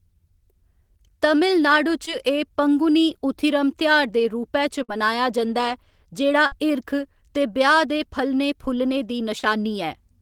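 Speech recording with two kinds of network loss. Short concealed packet loss occurs at 2.05 to 2.09 s and 9.39 to 9.45 s, where about 20 ms and 40 ms of audio failed to arrive. The decoder extended the preceding sound and blended back, which is heard as a brief smear. A burst of packet loss occurs at 4.83 to 4.90 s and again at 6.46 to 6.54 s. Each time about 60 ms is missing. The receiver held the last sound for roughly 55 ms while fading it down, and then jumped ahead, so material between the two points is lost.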